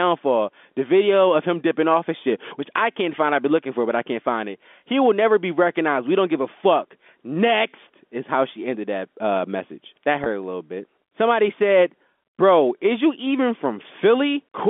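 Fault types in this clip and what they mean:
Packet loss with pitch repetition, at 10.24 to 10.26 s: a gap of about 20 ms, which fits a single lost packet, is bridged by the receiver replaying the last pitch period of the speech to cover the missing stretch. Because the loss is so short, it comes across as a brief, slightly held buzzy tone, heard through the narrow 250 Hz to 3.5 kHz band of the G.711 telephone line.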